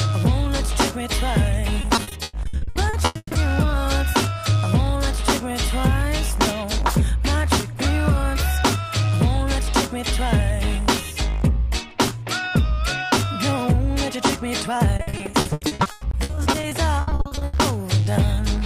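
From 1.81 to 3.37 s, and again from 14.97 to 17.55 s, repeated packet loss gives a robotic sound. Gaps of up to 140 ms recur rapidly and are patched by stretching the preceding audio, concealing roughly 40 to 46 percent of each stretch and leaving it choppy with pieces missing.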